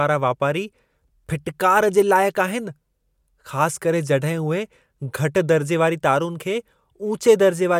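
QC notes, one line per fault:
No fault to note.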